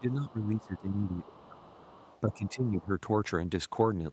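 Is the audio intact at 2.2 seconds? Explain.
No. From 1.76 to 2.48 s there's other side's voice leaking through, a faint second voice about 25 dB under the main talker. It's likely loudspeaker playback that the echo canceller didn't fully scrub from the microphone, so that far-end sound rides underneath.

Overlapping that, from 2.24 to 2.88 s, you get speech suppressed in double talk. The talker's voice dips by up to about 10 dB over roughly half a second, likely because the canceller couldn't separate the talker from the echo and turned everything down.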